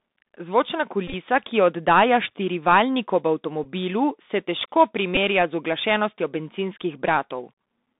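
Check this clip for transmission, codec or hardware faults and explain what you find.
Two faults are present: Bluetooth CVSD headset codec damage across the whole clip, and three Bluetooth headset packet repeats.

Bluetooth CVSD headset codec, throughout: the speech is confined to roughly 200 Hz to 3.7 kHz. The coder tracks the waveform one bit at a time with an adapting step, which fits 64 kbit/s CVSD. Loud high sounds outrun the step, so sibilants turn scratchy over a granular hiss. That hiss and the slope distortion set it apart from a merely band-limited phone line, whose tone is dull but clean.

Bluetooth headset packet repeated, from 1.08 to 1.14 s, just before "ki jo oddaja štirivaljnik": about 41 ms of audio was lost, scattered over 60 ms, with the longest run around 20 ms. The decoder replayed the last packet each 3.75 ms, giving a brief buzz near 267 Hz. A gap or mute would be silent, but this is a pitched buzz.

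The same fault occurs at 3.64 s, after "jo oddaja štirivaljnik ob", and at 5.15 s, between "se težko" and "z uglašenostjo bencinskih". Each repeat covers 15 ms and is heard as a short buzzy tick.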